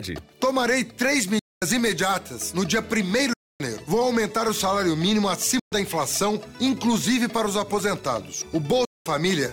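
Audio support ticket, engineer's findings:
Silent gaps at 1.39, 3.33, 5.59 and 8.85 s (0.12 to 0.26 s), with hard vertical edges on waveform and spectrogram. Sound resumes further on, not where it stopped. Likely Bluetooth dropout from late, discarded packets.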